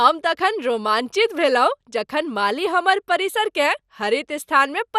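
Speech, with dull, gurgling, granular distortion throughout, likely from MP2 compression. Starved sub-bands switch off, leaving nothing above 15 kHz. The damage fits an 80 kbps rate.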